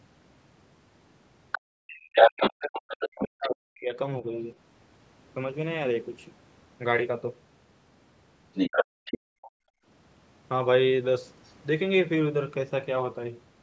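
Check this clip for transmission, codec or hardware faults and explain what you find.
Three echo-canceller faults are audible in the speech, all clustered around two stretches where the far end was playing through a loudspeaker.

Other side's voice leaking through, at 1.52–1.57 s, 2.16–2.81 s, 3.19–3.25 s and 8.54–9.51 s: a second voice cuts in, most likely residual loudspeaker echo the canceller missed. It sits slightly below, well above, slightly below, then level with the talker.

Speech suppressed in double talk, 1.54–4.24 s: the talker's voice dips and breaks up for roughly 2 s in total, sinking by around 40 dB. The likely cause is the canceller mistaking simultaneous talk for echo and attenuating both.

Background gated by the echo canceller, 8.85–9.86 s: room tone drops away by about 38 dB for roughly 0.7 s, then returns. The canceller likely clamped the microphone hard while the loudspeaker played.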